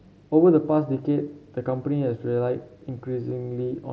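Concealed Bluetooth headset packet loss occurs at 3.30 s in this speech clip. For about 15 ms, audio between headset and phone went missing, which fits a couple of lost frames. The receiver covered the gap by repeating the best-matching piece of the waveform just before it. The audio carries the slight graininess of the mSBC wideband headset codec.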